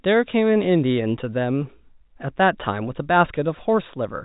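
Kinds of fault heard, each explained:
No faults are heard: the speech arrives at telephone bandwidth through standard G.711 A-law coding, with only the faint, level-following quantisation noise that format carries.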